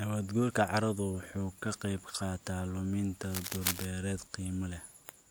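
A worn cable, connector or control being moved is the likely source of the cable scratch noise in this speech clip: as the contact shifts, its resistance jumps about rapidly, and those fluctuations ride on the signal as a dense, uneven burst of noise. From 3.24 to 3.85 s the speech is overlaid by a rough scratching and rustling, sitting only a few decibels below the speech itself, so it stands out clearly before the clip settles again.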